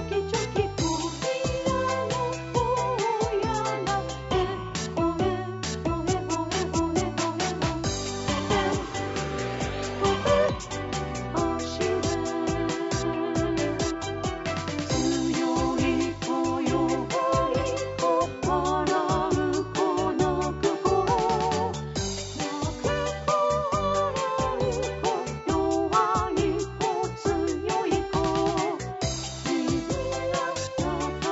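Nothing stood out on listening; the audio carries the expected character of call microphone processing, with the lowest bass trimmed away and nothing above 8 kHz.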